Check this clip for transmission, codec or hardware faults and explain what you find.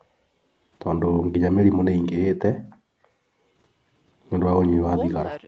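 No faults found here.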